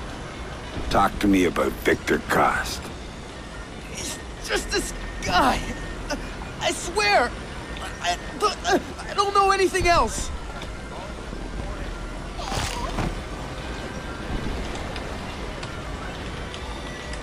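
No technical faults can be heard anywhere in the audio.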